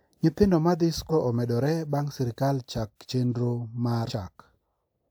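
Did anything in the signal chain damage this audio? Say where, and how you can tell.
Yes. Compressed frames were skipped at the codec stage, at 1.09–1.12 s and at 4.07–4.11 s after "sirkal chak chendro". At each point the sound jumps ahead, about 0.4 s and 0.15 s, which fits whole 46.4 ms frames being dropped.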